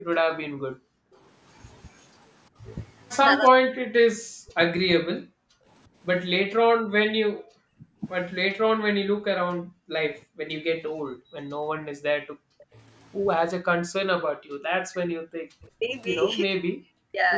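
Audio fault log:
0.0 to 17.2 s, speech suppressed in double talk: When both ends talk at once, the echo canceller likely cannot tell this talker apart from the loudspeaker echo, so it turns everything down together. The talker's voice dips sharply and loses level in patches, at worst by about 40 dB, which is close to silence. The affected moments add up to roughly four seconds across the clip. The voice sounds as if it is being pushed away mid-phrase and then returns.
0.84 to 1.13 s and 6.75 to 11.34 s, background gated by the echo canceller: While the far-end loudspeaker is playing, the canceller clamps the microphone path, at its deepest by about 40 dB. The room tone drops away and then comes back when the canceller releases. The first gap is brief, around a third of a second. The later stretch holds about a second of gating in total, spread over those four and a half seconds, so the background flickers in and out.
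1.13 to 2.07 s and 12.58 to 12.66 s, echo leak: Sound from the loudspeaker likely gets past the canceller and is sent back, arriving 345 ms after the original as a delayed copy. In the first span it is very faint and lasts nearly a second. At 12.6 s it is only a short, stronger scrap. Both sit far below the direct voice, in audio that runs up to 8 kHz, and come across as a trailing ghost of what was just said.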